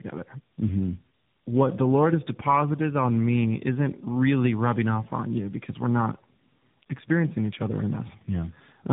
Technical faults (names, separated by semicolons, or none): tandem speech coding